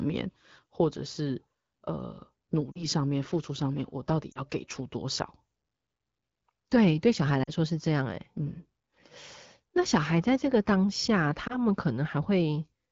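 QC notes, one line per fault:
2.72–2.85 s, 4.31–4.42 s, 7.43–7.50 s and 11.47–11.56 s, lost AMR speech frames: the first three fit two consecutive 20 ms frames dropped, and the last fits a single frame. The wideband decoder covers each loss by repeating the last good pitch and vocal tract settings at falling gain, so the speech briefly fades toward near silence, then comes back weak or rough for a moment.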